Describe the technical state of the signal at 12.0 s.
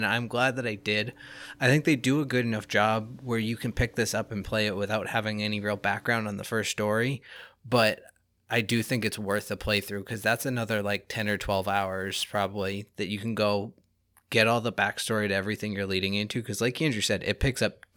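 At 12.0 s the signal has sample clock jitter. It runs from about 7.36 s, after "on the first story", to 12.90 s, just before "that you can go". The converter's clock wobbles by roughly 7 microseconds, so each sample lands a little early or late. Steep, fast-changing parts of the speech waveform suffer most. The result is a rough, hissy error roughly 25 dB below the speech. It swells on loud, bright sounds and disappears in pauses.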